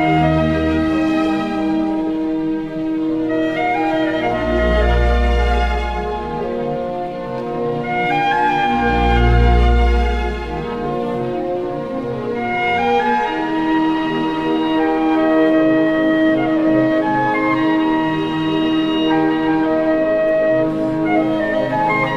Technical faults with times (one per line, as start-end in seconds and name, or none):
none